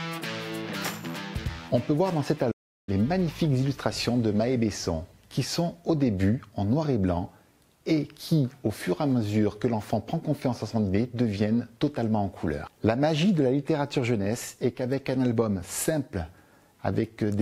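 At 2.51 s a playback stall cuts the sound off mid-flow until 2.89 s, likely from a player starved of data, showing as a flat waveform and blank spectrogram column.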